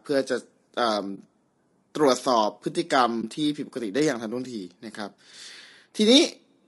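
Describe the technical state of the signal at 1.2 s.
Just before 1.2 s, from 1.15 to 1.18 s, an AAC frame loss with muting leaves a brief dip. The decoder zeroed the missing spectrum, which fits one lost 20 ms frame. On a waveform, the envelope dips briefly and back; on a spectrogram, a narrow, blank vertical band.

Across the whole signal, including this point, the sound is rough and grainy, likely from low-delay AAC compression (AAC-ELD) at a low bitrate around 32 kbps. A spectrogram shows noise filling the gaps between the harmonics, and a thin, synthetic-looking top band.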